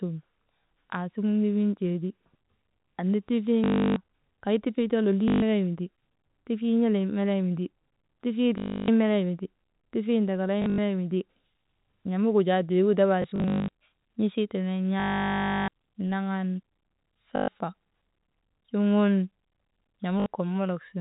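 Packet loss with the last packet repeated breaks up the speech at 3.64–3.96 s (just before "kay tifii too"), 5.28–5.42 s, 8.58–8.88 s, 10.62–10.78 s, 13.22–13.68 s, 15.0–15.68 s, 17.36–17.48 s and 20.2–20.26 s. The 10.62 s and 13.22 s events are scattered losses rather than solid gaps. Where packets went missing, the receiver replayed the previous packet. Each repeat seldom lines up with the pitch, and longer runs give a robotic 50 Hz buzz, which fits 20 ms packets. On a spectrogram these runs appear as frozen, repeating frame slices. On the waveform they look like tiled, identical segments. The telephone-band limit at 4 kHz stays visible throughout.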